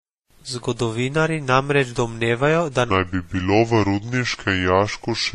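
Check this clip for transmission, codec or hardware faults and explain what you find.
Two faults are audible in this speech clip.

Transcoding between lossy codecs runs throughout. Nothing is present above 14 kHz. Two layers of codec smearing sit on top of each other. The sound points to a low-rate AAC-LC stage of about 32 kbit/s, likely re-encoded as WMA at about 64 kbit/s. The later encoder spends its bits on the earlier damage, so the 14 kHz ceiling and both sets of artefacts stay.

A section at the wrong speed starts at 2.90 s, just after "namreč domnevajo da", and runs to the end. Playback is 0.784 times the original speed. The speech turns slow and deep, roughly four semitones lower. This is likely a clock mismatch in editing or playback.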